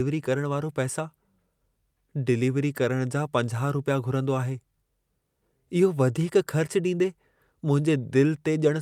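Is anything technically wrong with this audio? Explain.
No, nothing here sounds technically off to me; it's just a speech recording with no problems I can pick out.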